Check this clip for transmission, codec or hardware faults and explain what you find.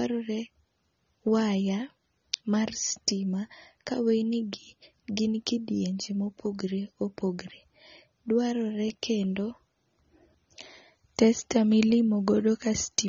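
There's one fault, and it runs through the whole recording: AAC compression damage that's plainly audible from start to finish. Nothing comes through above about 7 kHz, so the speech sounds dull and muffled, and sibilants turn fizzy and smeared. The likely cause is a low-bitrate AAC-LC encode, which fits something around 24 kbps. At that rate the encoder drops the top band entirely and quantises what's left coarsely, leaving that grainy, warbly texture.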